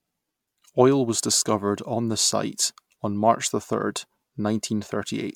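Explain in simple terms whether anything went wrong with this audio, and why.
Something went wrong: from start to finish the speech sounds swirly, hollow and smeared, with blurred starts to sounds. That is generation loss, likely from being saved as MP3 around seven times over. A single poor save would sound duller but steadier.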